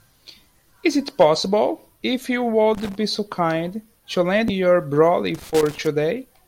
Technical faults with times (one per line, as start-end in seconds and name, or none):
2.74-2.95 loose connector crackle
4.48 damaged data in a compressed stream
5.34-5.87 loose connector crackle